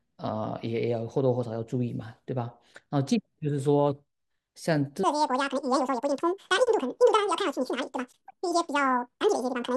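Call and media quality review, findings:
Audio read two samples at a time (double speed), 5.04 s to 9.76 s: sound jumps to 2x speed and a full octave (12 semitones) up. Probable component: decoder/reader frame-width mismatch. Differs from resampling error: exact 2x.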